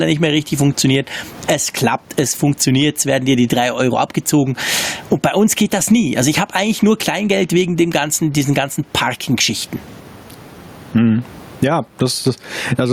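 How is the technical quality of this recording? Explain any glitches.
The recording suffers from gain pumping throughout the speech. The room tone sits about 36 dB below the speech, and the gain swings by about 20 dB. Loud and quiet syllables end up pressed to a similar level, so the delivery sounds flattened. The likely cause is input gain set far too high, with a fast limiter or compressor clamping down on each loud moment and releasing in the gaps.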